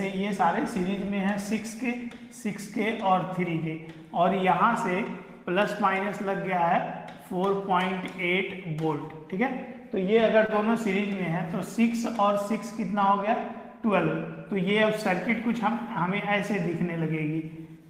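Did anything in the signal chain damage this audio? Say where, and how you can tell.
Yes. At 10.46 to 10.52 s a sound is held 28 ms too long: a short stall from a late packet, where the network jitter buffer ran empty and stretched the audio until it arrived.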